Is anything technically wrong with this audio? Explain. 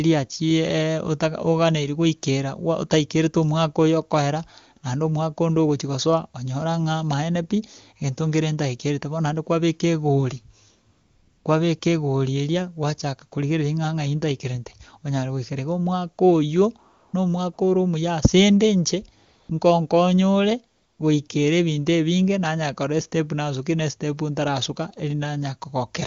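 Yes. AMR comfort noise appears at 10.91 to 11.45 s (just after "naende kwabeka egori"), 11.80 s, 16.93 to 17.13 s, 17.53 to 17.57 s, 19.25 to 19.49 s, 20.75 to 20.99 s and 21.28 s. The phone judged these moments silent and stopped sending speech frames. The receiver filled each gap with synthetic noise, so the real background drops out and a smooth, steady hiss switches in and out. The wideband speech around these gaps is clear, which fits a high-rate AMR-WB mode.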